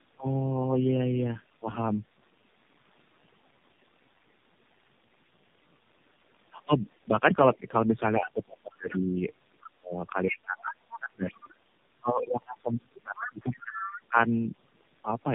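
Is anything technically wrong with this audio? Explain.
Yes. Throughout the speech there is tandem speech coding: the sound has gone through AMR-NB at 7.4 kbit/s three times, with G.711 A-law links in between, so each pass re-encodes the previous pass's errors. Nothing survives above 3.5 kHz, and the result is rough, muffled and warbly, worse than a single narrowband coder would leave it. The damage is steady across the clip rather than tied to any one moment.

Speech suppressed in double talk appears three times: a brief dip of about 15 dB at 7.55 s lasting around 70 ms, then 8.17 to 9.17 s with drops reaching about 25 dB, and 9.74 to 14.14 s with drops of about 30 dB over roughly four seconds. The talker's voice dips. This is likely an echo canceller turning down the near talker while both sides spoke at once.

The other side's voice leaking through shows up at 8.92 s (about 15 dB below the speech), at 9.61 s (about 20 dB below), and from 13.17 to 13.99 s (about 10 dB below, the most noticeable). 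A second voice surfaces in scraps under or between the main speech. This likely comes from loudspeaker playback that the echo canceller did not fully remove from the microphone.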